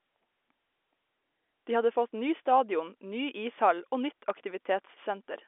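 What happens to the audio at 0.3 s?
Nothing goes wrong at 0.3 s; the speech there is intact, carried through the same narrow telephone band as the rest of the line.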